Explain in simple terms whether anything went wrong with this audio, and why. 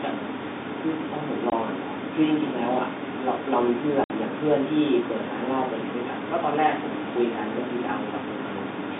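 Packet loss filled with silence at 1.50–1.52 s and 4.04–4.10 s: pieces of the speech never arrived, so short, abrupt silent gaps cut into it.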